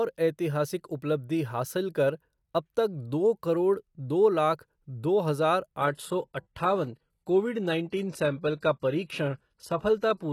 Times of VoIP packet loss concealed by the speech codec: none

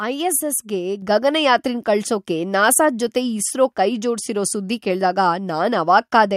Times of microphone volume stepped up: 1.02

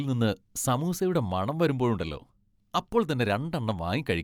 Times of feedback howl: none

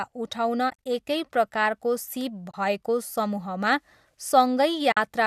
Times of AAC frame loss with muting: 0.69-0.86, 2.50-2.54, 4.92-4.97

